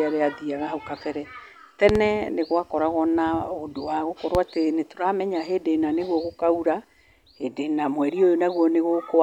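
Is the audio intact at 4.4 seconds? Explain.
No. A loud pop sits between 4.35 and 4.39 s, after "gwakoragwo na ũndũ wa" and before "atĩ nĩtũramenya hĩndĩ ĩna". A single sharp thump, roughly 15 dB above the speech, likely comes from an electrical pulse entering the signal chain. On a waveform it appears as a tall spike, and on a spectrogram as a thin vertical broadband stripe.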